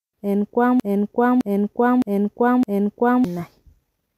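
A broken-record loop runs from 0.80 to 3.24 s: a 0.61 s fragment of the speech plays four times back to back, identical each pass. The stream likely stalled and kept resending its last buffered piece, so the speech due in that span is gone.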